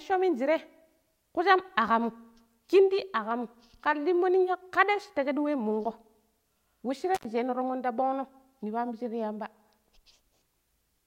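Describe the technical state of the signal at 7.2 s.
At 7.2 s the speech drops out through an intermittent contact, running from about 7.15 to 7.25 s with the line open for roughly 86 ms. A loose plug or cable conductor briefly loses touch, so the signal path breaks physically. Crackle marks each edge as the contact scrapes open and closed, and faint hiss remains in the gap. That analogue crackle and residual hiss set it apart from a clean digital dropout, which leaves only flat silence.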